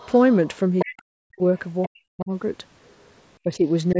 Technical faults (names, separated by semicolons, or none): other side's voice leaking through; speech suppressed in double talk